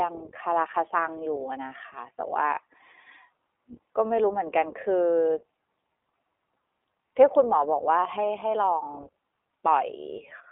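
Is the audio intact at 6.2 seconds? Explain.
No: iLBC codec damage runs throughout, including 6.2 s. Each 20 ms frame is coded independently, leaving rough, synthetic speech with nothing above 3.8 kHz.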